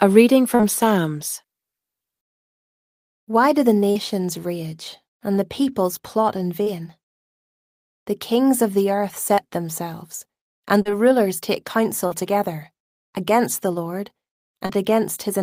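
Seven times in this speech, about 40 ms of audio failed to reach the decoder, and the receiver patched each gap with short concealed packet loss, extending the preceding sound and then crossfading back. This happens at 0.55, 3.91, 6.63 (after "the peoples plot in"), 9.34 (between "kings of the earth" and "themselves and"), 10.82, 12.07 (between "rulers take" and "together against the") and 14.66 s. Each is heard as a brief smear or wobble.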